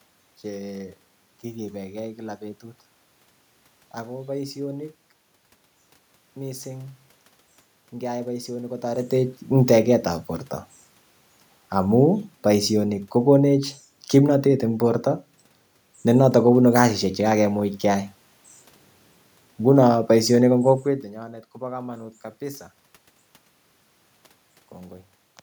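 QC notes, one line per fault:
No system faults found in this speech recording.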